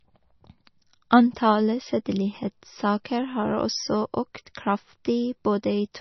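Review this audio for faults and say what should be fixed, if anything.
The speech has heavy MP3 compression damage from start to finish. Nothing remains above 6 kHz, so the top octaves are simply gone and the sound is dull. The encoder is starved of bits. It discards weak frequency lines, and they flicker on and off between frames. That gives a watery, swirly texture, with chirpy s sounds and smeared consonant attacks. The cause is likely a low-bitrate MP3 encode, which fits a rate near 28 kbps. To prevent it, keep a lossless or high-bitrate master and avoid re-encoding at low rates.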